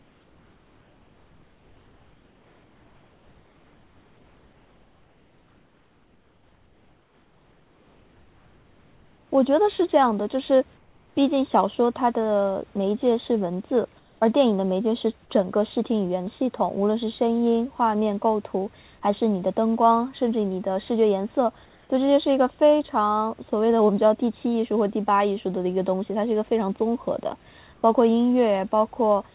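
It's a speech clip, and in the pauses the real room background gets swapped for comfort noise, a steady, featureless hiss sitting about 1 to 4 dB quieter than the actual background, which is itself about 36 dB under the speech. It covers 0 to 9.31 s, then 10.77–11.15, 13.99–14.21, 21.65–21.89 and 27.73–27.83 s. The likely cause is discontinuous transmission on the sender cutting audio when no speech is detected, with the receiver filling in synthetic noise. The whole thing is band-limited to 4 kHz, consistent with a narrowband call codec.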